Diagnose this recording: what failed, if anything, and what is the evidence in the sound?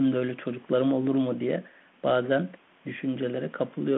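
Nothing has failed anywhere in the chain for this speech recording. The sound sits in the narrow 150 Hz to 3.4 kHz telephone band of a G.726 ADPCM link, with only the light roughness that fits 32 kbit/s coding, and the call microphone processing's trimming of the lowest bass is normal behaviour.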